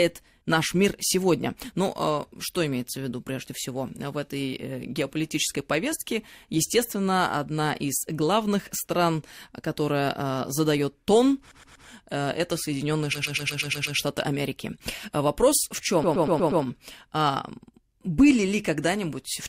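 A short run of compressed frames was sent more than once, so the decoder replays the same 120 ms of speech, a block that fits six frames. These repeated frames appear three times: at 11.51 s, replayed three extra times and adding 360 ms; at 13.13 s, seven extra plays adding 840 ms; and at 16.03 s, five extra plays adding 600 ms. Each is heard as a rapid mechanical stutter that stretches the speech.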